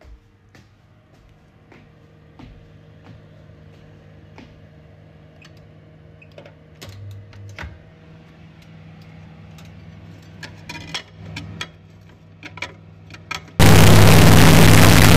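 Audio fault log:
13.59–15.16 s, integer read as float: samples stored as 32-bit integers are decoded as 32-bit floats, so values land near zero or far past full scale, giving a harsh, very loud buzzing square wave; the waveform slams between silence and clipped rails, with dense broadband harmonics on a spectrogram.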